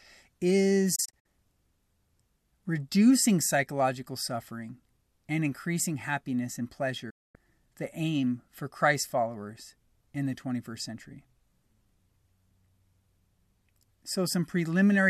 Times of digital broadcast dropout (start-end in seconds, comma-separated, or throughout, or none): 0.95-1.26, 7.10-7.35